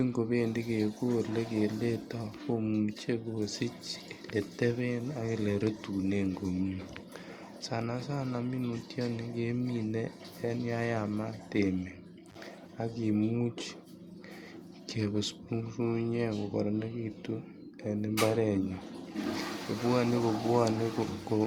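At 12.28 to 12.37 s, an intermittent contact briefly opens the line for about 43 ms: the speech drops to faint hiss, framed by crackle, showing as a near-empty waveform gap with vertical spectrogram clicks.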